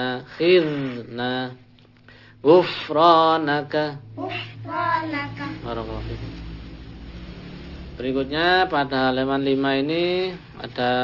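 Right from the start and all the way through, there's aliasing. Somewhere along the line the audio got squeezed down to a lower rate, which sounds like 12 kHz, with no filter to clear out the top end first. Anything above 6 kHz folds back down into the band at the wrong pitches, sitting maybe 20 dB under the real sound. So the highs come across gritty and a bit metallic, and the spectrum stays packed right up to that 6 kHz ceiling.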